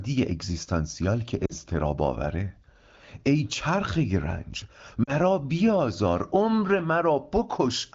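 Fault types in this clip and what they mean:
Lost AMR speech frames: at 1.46–1.53 s and 5.03–5.12 s, the decoder repeats earlier pitch and vocal-tract settings with fading gain, producing short dips toward near silence.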